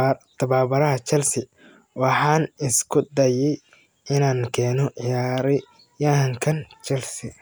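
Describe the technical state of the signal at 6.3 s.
At 6.3 s the speech signal is intact, with no audible technical fault at that moment.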